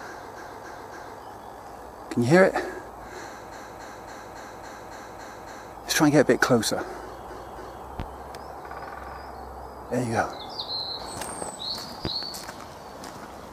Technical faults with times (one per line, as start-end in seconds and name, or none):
0.35-1.19 repeated frames
3.51-5.74 repeated frames
7.27-7.83 repeated frames
8.00-8.03 loud pop
12.05-12.26 loud pop